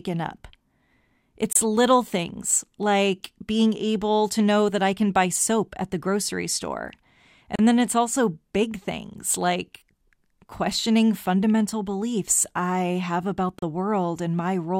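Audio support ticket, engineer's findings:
Gap at a join of encoded pieces, three times: 1.53–1.56 s (27 ms), 7.56–7.59 s (34 ms), 13.59–13.62 s (34 ms). Repeats every 6.0 s, pointing to speech encoded in separate chunks and concatenated untrimmed. Each chunk's encoder start delay and last-frame padding survive at the seam. Symptom: brief dropout mid-speech, edges smeared by the codec, then the speech resumes exactly where it stopped.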